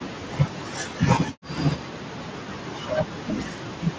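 A short speech clip, carried over a wideband Bluetooth headset link, and it's got a few problems. From the start to 1.59 s, and again from 1.84 s to the end, the talker keeps dipping and breaking up, at times by as much as around 40 dB. That pattern sounds like speech suppressed in double talk: the echo canceller likely couldn't tell the near talker from the far side's echo while both were speaking, so it pulled everything down. At 1.27 s there's a tiny concealed Bluetooth headset packet loss, a single 7.5 ms gap the receiver patched over by repeating recent waveform. It's nearly inaudible. Then between 3.28 and 3.33 s a brief scrap of echo leak slips through, a copy of the voice delayed by about 240 ms and sitting about 10 dB under the speech. That's likely a loudspeaker on the far end whose echo canceller didn't fully scrub what its mic picked up.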